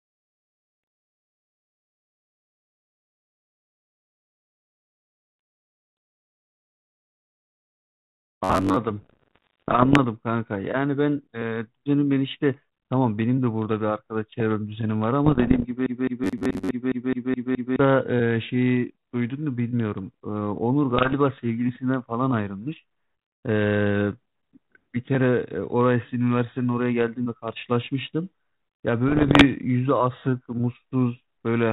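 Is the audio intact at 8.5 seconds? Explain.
No. From 8.44 to 8.76 s the speech turns into a rigid, metallic buzz pitched at about 94 Hz, still loosely tracking the speech's shape. This is robotic sound from repeated short buffers, the likely cause being audio arriving too seldom. The playback fills the gaps by replaying the last fragment, roughly 10.7 ms long, over and over, skipping most of the real audio in that span, and that fixed repeat rate imposes the buzz pitch.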